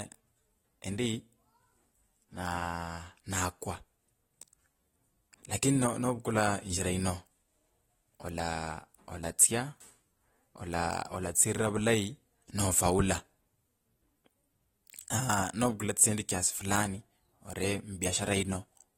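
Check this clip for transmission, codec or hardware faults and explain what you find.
One codec fault runs through the whole recording. AAC compression, likely AAC-LC at a low rate, has quantised each frame's spectrum too coarsely for the bits available, in a way that fits a bitrate around 32 kbps. Nothing survives above 16.6 kHz, and the damage is plainly audible from start to finish. The speech sounds dull and smeared, with a warbling, fizzy texture on sustained vowels and sibilants where sparse spectral lines shift from frame to frame.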